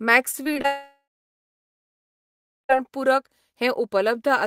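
Right from about 0.31 s to 0.66 s you get repeated packet loss, the robotic kind. Four short holes land in that third of a second, the longest around 23 ms, and each one gets papered over by stretching whatever sound came just before. Roughly a quarter of that stretch is patched, about 80 ms of speech in total, so it comes across choppy and robotic, with small bits missing.

Straight after, from 0.66 s to about 2.71 s, the speech cuts out for roughly two seconds, most likely a long network dropout. At first there's a brief smeared buzz where the last sound is carried forward and fades, and then it's just dead silence for about 1.7 s. When the speech returns at 2.71 s it picks up further along, and whatever was said in that gap is simply gone.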